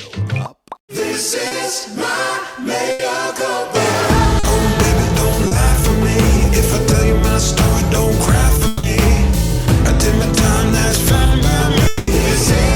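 The audio has several network packet-loss faults. Short concealed packet loss at 1.47, 4.39 and 5.47 s leaves brief smears where about 40 ms was synthesised from the preceding sound. A burst of packet loss at 2.91–3.02 s replaces about 80 ms with a held, fading continuation before the audio resumes further on. Between 8.67 and 8.86 s and again between 11.87 and 12.10 s, the sound stretches into a decaying buzz or hiss for 160 and 200 ms, without reaching silence, then resumes with that stretch missing, likely a long network dropout.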